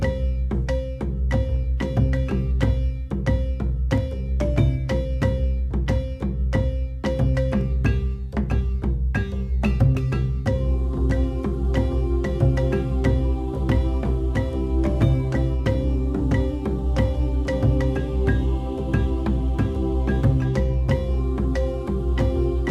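Clock drift buffer slips recur from 0.35 s to 22.12 s as a brief click every 1.81 s, about fifteen in all. They likely arise from two devices whose clocks disagree by around 100 ppm, so a handful of samples is dropped or repeated at each slip.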